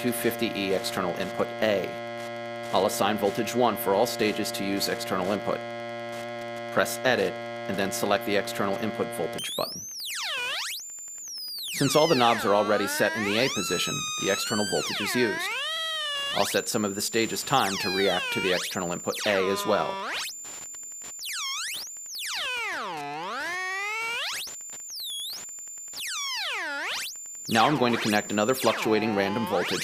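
From the first moments to the end, a steady ticking about ten times a second sits under the sound. This is Wi-Fi interference: a nearby radio's beacon, repeating every 102.4 ms, is rectified by the audio circuit and leaks in roughly 25 dB below the program, with rougher rasps when data traffic bursts between beacons. Its rigid clock-like spacing separates it from mains hum, which is a continuous tone, and from random crackle, which has no regular rhythm.

Running through the whole clip is clock drift between sender and receiver. The sending device's audio clock is fast by something like five percent, so samples arrive quicker than the receiver plays them out and its jitter buffer keeps creeping toward overflow. Unlike a single dropout or a one-off glitch from packet loss, the disturbance never settles. It stays present for the entire duration because the two clocks never agree, and with a fast sender the buffer never runs dry.

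The audible result is repeated timing corrections from 0.09 s to 29.68 s, with the material effectively running at 104% speed. To stop the buffer from overflowing, the receiver repeatedly trims out short pieces, always cutting rather than repeating, at uneven intervals. Each edit is small, heard, if at all, as a faint hiccup or a slightly hurried, unsteady pulse. That one-directional, irregular pattern is what separates it from a stuttering loop, which repeats the same fragment, and from evenly spaced pitch-shift artefacts.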